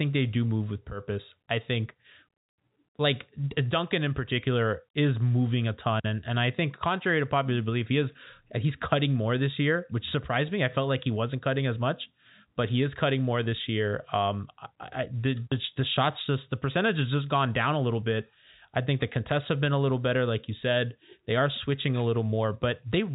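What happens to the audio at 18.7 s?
Nothing goes wrong at 18.7 s: the audio is intact there, with the telephone-band G.711 coding simply carrying on as it does throughout, with nothing above about 3.8 kHz.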